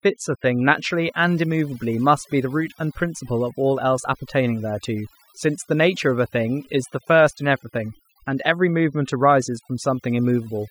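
Overdone noise removal runs through the speech: an over-aggressive noise reducer has cut frequency bands near its noise estimate, along with quiet voice detail. Pauses drop to near silence with twinkling specks. A spectrogram shows isolated dots on an empty floor.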